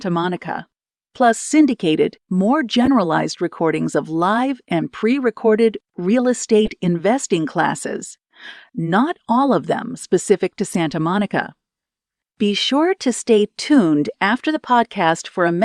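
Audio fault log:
2.81–2.88 s, corrupt frame decoded: a short, loud squeaky burst between "syndicated more" and "recordings of live and". Its length suggests a few damaged compressed frames that the decoder played anyway.
6.65–6.72 s, corrupt frame decoded: a similar loud chirp after "and pre recorded real", just before "investing classes". Flipped bits gave wrong gains and codes, which put energy at the wrong frequencies for about two frames.
10.69–10.75 s, corrupt frame decoded: a quieter blip after "of them specific to", with the same cause.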